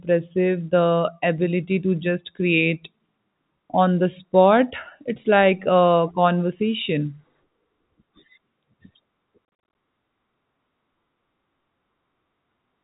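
From 9.45 to 9.75 s, packet loss filled with silence punches gaps, up to 40 ms, into the speech, together losing 200 ms. The pattern fits 10 ms packets. Waveform and spectrogram show flat, hard-edged blank columns across the telephone band.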